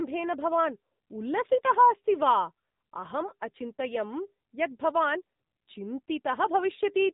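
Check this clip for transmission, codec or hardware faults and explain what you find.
One codec fault runs through the whole clip. AMR narrowband mobile codec: the speech sounds thin, buzzy and synthetic throughout, with nothing above 4 kHz. The 8 kHz sampling caps the band, and the pulse-driven vocal-tract model at this plainly audible quality fits a low mode of about 7.4 kbps.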